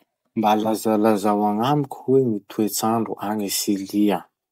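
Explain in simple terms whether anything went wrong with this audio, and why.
Nothing went wrong here: the speech signal holds steady the whole way, with no dropouts, glitches or sudden changes in level or tone anywhere in the recording.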